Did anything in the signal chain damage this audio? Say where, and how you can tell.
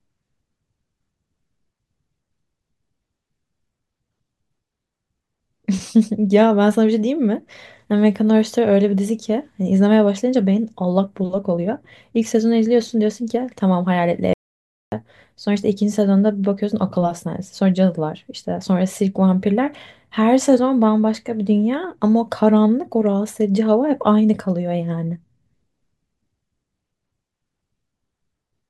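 Yes. At 14.33 s the speech cuts out abruptly and returns at 14.92 s, leaving a gap of about 0.59 s. This is an audio dropout to silence: plain silence with no room tone. On the waveform the trace collapses to a flat line with hard edges at both ends, and the spectrogram shows a clean black vertical band across every frequency. The cause is likely the input path upstream of the converter briefly losing signal, through a connection fault or mute, while recording carried on writing zeros.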